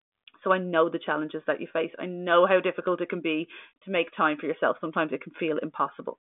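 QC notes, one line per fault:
No faults heard.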